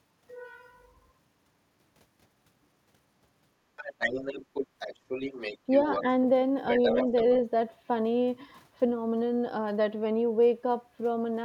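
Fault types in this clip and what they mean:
Other side's voice leaking through: A second voice sits underneath the main talker from 3.76 to 6.01 s and again from 6.68 to 7.35 s, roughly 10 dB below the speech, faint but clearly a separate voice. This likely comes from the talker's device playing the far end over a loudspeaker, with the echo canceller failing to strip all of that playback out of the microphone signal before sending it on.
Speech suppressed in double talk: Around 7.04 to 7.1 s, while the leaked voice is still present, the main talker briefly drops in level by a few decibels, a short dip lasting well under a tenth of a second. This likely happens because both sides were talking at once, and the echo canceller, unable to tell its own talker from the loudspeaker echo, turned everything down together.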